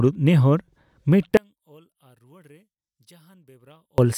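From 1.37 s to 3.98 s the speech collapses when heard in mono, dropping by about 34 dB into a faint residue, then returns at full strength. The likely cause is one channel inverted: one side of the stereo pair has flipped polarity, so the centred voice, identical in both channels, cancels itself when they are summed, leaving only the small difference between them.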